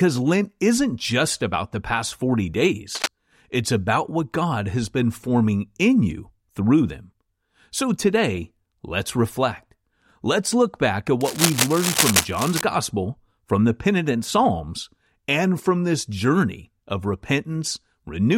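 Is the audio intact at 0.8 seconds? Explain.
Yes, the audio is intact at 0.8 seconds, with no dropout, click, distortion or other fault at that moment.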